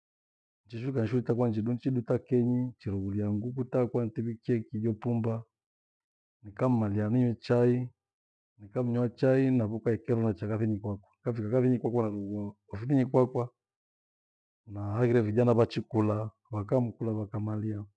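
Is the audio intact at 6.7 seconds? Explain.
Yes, the speech at 6.7 seconds is intact, with no dropout, click, distortion or other audible fault at that moment.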